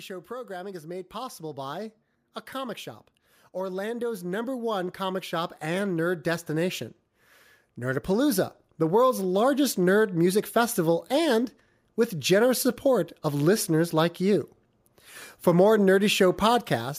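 Automatic gain rising occurs three times, from 0.08 to 1.96 s before "a comic shop", 3.58 to 6.84 s, and 7.76 to 9.77 s before "nerd music festival and". Each time the gain control judged the level too low and slowly raised it by about 4, 8 and 4 dB, so voice and background swell together.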